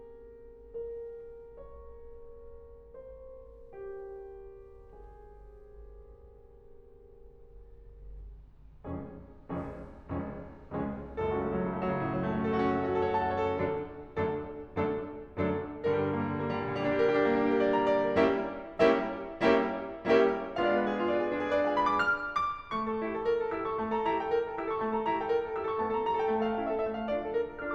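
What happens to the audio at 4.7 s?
At 4.7 s the music plays through intact, with no audible fault at that moment.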